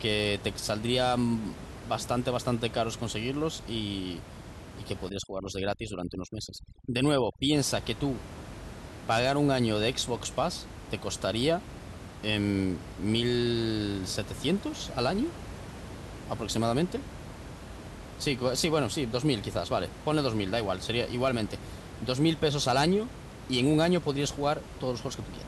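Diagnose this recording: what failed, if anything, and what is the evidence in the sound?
Overdone noise removal in call processing, from 5.10 to 7.56 s. The room noise, about 14 dB below the speech, collapses to near silence with twinkling specks. Over-aggressive suppression gates off bands that sit near its noise estimate, and quiet speech detail goes with them.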